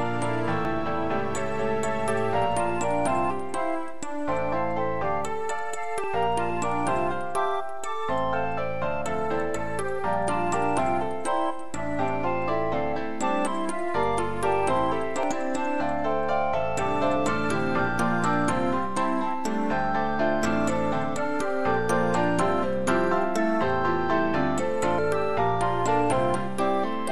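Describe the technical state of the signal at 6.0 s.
At 6.04 s the sound jumps ahead about a tenth of a second, likely a dropped buffer (overrun), where samples got overwritten before being read.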